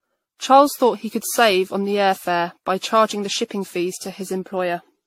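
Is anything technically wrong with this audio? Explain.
Yes. The speech shows generation loss from start to finish. It sounds swirly, smeared and hollow, worse than a single lossy encode would leave it. Consonant attacks blur, and nothing is present above 16.5 kHz. The likely cause is repeated lossy coding, consistent with AAC at around 64 kbit/s, done about seven times over. Each pass quantises again on a shifted frame grid. So noise and spectral gaps build up with every generation.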